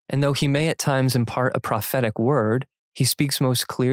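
No technical faults can be heard in this speech recording.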